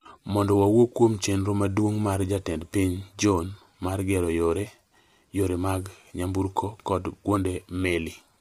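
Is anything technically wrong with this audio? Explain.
Yes. Throughout the speech there is plainly audible roughness and graininess, with noise filling the gaps between the harmonics and a thin, synthetic-sounding top band, which points to low-delay AAC compression, likely AAC-ELD at a low bitrate around 32 kbps. Its very short frames resolve pitch harmonics poorly, which separates it from ordinary AAC smearing or simple band-limiting.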